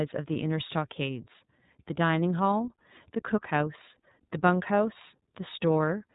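A speech recording passed through the iLBC codec for its whole length, with plainly audible coding damage. The audio stops at about 3.8 kHz, giving a narrowband, telephone-like sound. Each frame's excitation is coded independently, which makes the voice slightly rough and synthetic. The texture fits 30 ms frames at 13.33 kbps.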